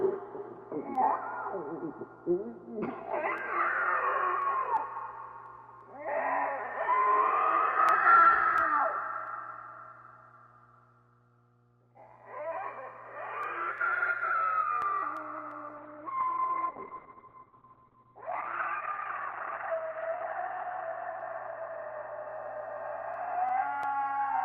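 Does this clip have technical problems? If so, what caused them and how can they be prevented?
Yes, two. There's mains hum running under the whole clip, a steady 60 Hz tone sitting quietly beneath the audio, likely from a ground loop or a nearby transformer leaking the power line in. Use balanced cables or a ground-lift/isolator and keep the gear away from power supplies.

From 15.79 s to 23.87 s there's a call bitrate drop. The network estimate fell, so the Opus encoder got starved and the sound goes rough and muffled, with the top end collapsing to about 4 kHz, which fits a drop from 32 kbps to around 7 kbps. It sits at its worst for roughly 4.5 s before recovering. A steadier or less congested connection, or setting a sensible minimum bitrate, would keep it from dipping that far.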